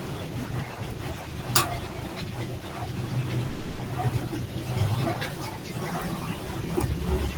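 From 3.49 to 3.81 s, a long network dropout likely cut off the incoming audio for about 300 ms. The receiver filled the entire gap by extending the last sound as a fading buzz or hiss, with no silence, and the speech resumes with that stretch lost.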